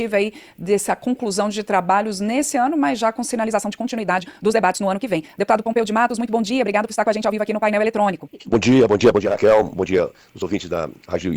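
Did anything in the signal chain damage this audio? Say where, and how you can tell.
Yes. From 3.35 s to the end, the pace suddenly jumps to about 1.67 times faster while the pitch stays put, so the audio turns rushed. This is likely a time-stretched section from software processing, which shortened the audio by dropping short pieces.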